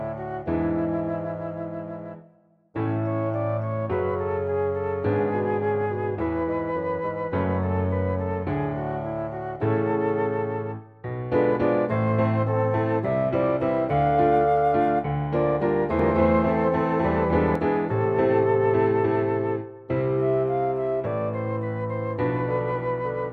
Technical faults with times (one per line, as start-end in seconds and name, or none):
15.99-17.55 doubled audio track